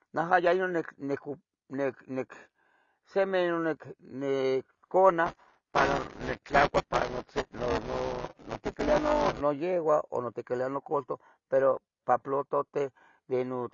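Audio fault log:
throughout: AAC compression. The speech sounds dull and smeared, with a warbling, fizzy edge on sibilants and sustained sounds. Nothing reaches above 7.3 kHz. The likely cause is AAC-LC coding at a low bitrate, which fits a stream of around 24 kbps. On a spectrogram the energy stops at a flat ceiling near 7.3 kHz, with patchy holes and blotchy, noise-like fill in the upper bands.
5.26–9.41 s: buffer tearing. A steady robotic buzz at 200 Hz sits on the speech and is present only while sound is playing. The writing and reading positions of the playback buffer have drifted until they cross in every period. About a fifth of each period then replays audio from around 10 ms earlier, with a hard join at both ends. A waveform shows regular discontinuities every 5 ms. A spectrogram shows vertical striations and a 200 Hz harmonic comb.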